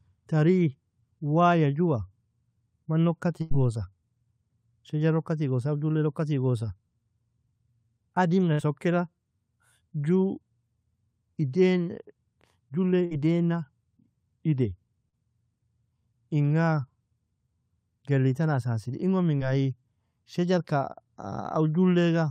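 At 3.41 s after "mana ukka", then 8.53 s and 13.05 s, bursts of packet loss drop about 100, 60 and 60 ms. Concealment continues the last sound and fades it, visible as a smeared, decaying tail and then an abrupt restart.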